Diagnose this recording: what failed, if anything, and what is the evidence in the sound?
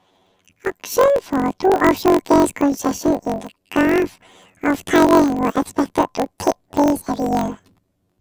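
Planar audio read as interleaved during format conversion: speech sits an octave high throughout, fluttering at 46.9 Hz, which fits 1024-sample blocks playing twice at double speed.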